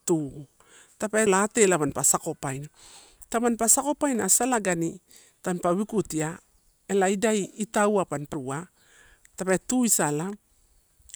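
A speech recording with two CD skips, at 1.26 s and 8.34 s. At each point the playback drops out for a few milliseconds, leaving a brief tick, and the speech resumes from a different place. Something, whether a knock or a flaw in the disc surface, pushed the laser onto another turn of the spiral track. The player muted briefly while it reacquired the track and continued from the new position, so continuity breaks abruptly at both points.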